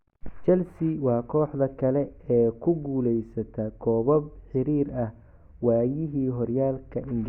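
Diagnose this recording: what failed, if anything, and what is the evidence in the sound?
What failed here is an adaptive stream at a lower bitrate, a network-side fault that shows up in the codec. At 1.92 s the speech suddenly loses its clean top end, and the treble turns synthetic through to the end, with no gap at the switch. That fits the player dropping from a full-band AAC rendition to a low-rate HE-AAC one, where the highs are rebuilt by band replication rather than actually coded, because the connection slowed.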